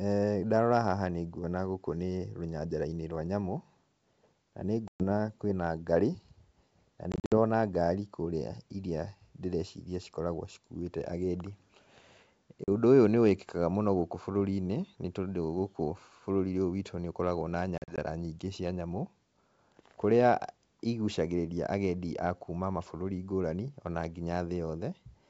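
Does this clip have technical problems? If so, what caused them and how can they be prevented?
Yes: packet loss on an ADPCM call at 4.88–5.04 s, 7.12–7.34 s, 12.64–12.69 s and 17.78–17.99 s. Lost packets are replaced with silence, and the decoder's adaptive predictor and step size drift out of step with the sender's. Each drop leaves a hard-edged silent hole, and the sound resumes mismatched for a few tens of milliseconds until the decoder re-aligns. The gaps are about 120 ms at 4.88 s and 40 ms at 12.64 s. The losses around 7.12 s and 17.78 s are scattered across about 200 ms, totalling 140 ms and 100 ms. Underneath, the 64 kbit/s G.722 wideband coding stays clear. To prevent it, use a jitter buffer with packet-loss concealment that resets or re-syncs the ADPCM decoder state, and carry the call over a network path with less loss.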